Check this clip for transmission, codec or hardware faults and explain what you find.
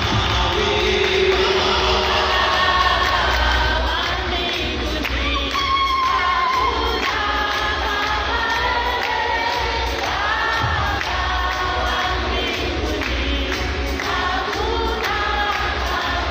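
One fault is present, a doubled audio track, running from the very start of the clip to 3.78 s. Throughout that stretch every sound arrives twice: a second full-band copy, about as loud as the first, trails it by roughly 0.3 s, with no decay or room colour, and it stops abruptly at 3.78 s. The likely cause is the same signal being mixed in again through a slower path, or an edit that left two copies out of step.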